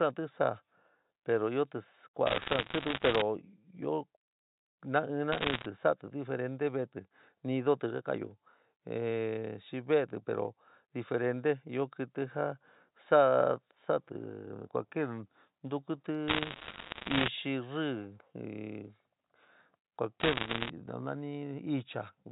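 Speech over a G.711 phone line, hit by bit errors on the digital line in four bursts of crackle at 2.27 to 3.22 s, 5.32 to 5.66 s, 16.28 to 17.28 s and 20.20 to 20.70 s. Roughly one to two percent of bits flip, each corrupting one sample, and flips on high bits make sharp ticks over the narrowband sound.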